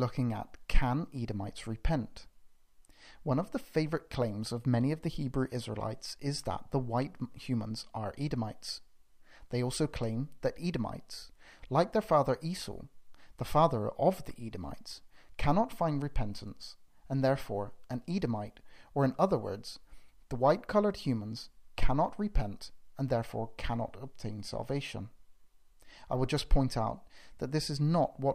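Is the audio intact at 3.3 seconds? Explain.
Yes, the audio is intact at 3.3 seconds, with no dropout, click, distortion or other fault at that point.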